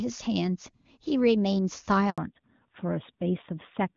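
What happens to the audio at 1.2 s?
Nothing goes wrong at 1.2 s: the speech carries on intact, with the AMR wideband (HD Voice) coding at its top rate of 23.85 kbit/s leaving no more than faint damage at that point.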